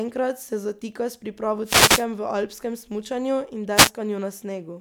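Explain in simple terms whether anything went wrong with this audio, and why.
Two wireless microphone noise hits: one from 1.63 to 2.06 s, after "se zatika s pripravo", and a shorter one from 3.75 to 3.91 s, after "v alpskem smučanju in". The radio link briefly faded, so receiver hiss surged up as a quick burst of static over the speech.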